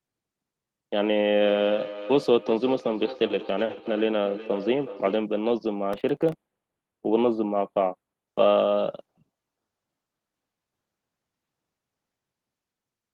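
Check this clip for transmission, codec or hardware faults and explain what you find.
Three faults are audible in this speech clip, two of them overlapping in the middle.

From 1.41 to 5.29 s there is feedback echo between two devices. A second device in the room replays the speech, and the first microphone picks it up again outside its own echo canceller's reach. Repeats arrive roughly every 0.4 s, peaking about 12 dB below the speech. They sound thinner and more ringing each time. A spectrogram shows faint, regularly spaced copies trailing each syllable.

From 5.79 to 8.28 s, channel delay causes comb filtering. One channel lags the other by roughly a tenth of a millisecond, a few samples, so summing to mono cancels shared content, with the first notch near 5 kHz. The speech turns hollow and phasey. A spectrogram shows fixed dark horizontal bands through the upper range.

From 5.93 to 6.32 s, processor overload crackle rides on top of this. 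Around ten buffer deadlines are missed, and the timing points to buffers of about 1.5 ms. Each miss repeats a scrap of old audio with hard edges, producing gritty tearing. The waveform shows a dense cluster of small discontinuities, and the spectrogram shows thin vertical broadband streaks.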